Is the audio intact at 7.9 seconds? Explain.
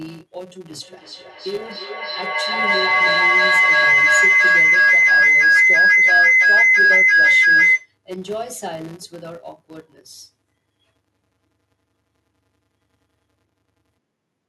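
No. At 7.9 seconds a shrill, sustained tone around 1.5 kHz is still present over the speech. Its repeats come roughly every third of a second and it has peaked at about 15 dB above the voice. This is feedback howl, running from 0.82 s and ending at 7.95 s. Two devices in the same room are on the call, so sound from the loudspeaker re-enters the microphone. Each trip round that loop adds level instead of losing it, and the build-up narrows onto the frequency the loop favours.

Under the howl there is also a steady 188 Hz buzz whose strength rises and falls with the signal's level. It comes from a filter restarted on every block. The filter discards its memory at each block boundary and starts again from silence, so every block opens with a small click. Those clicks repeat at 188 Hz, which fits a 256-sample block, and they run through the whole clip, including this moment.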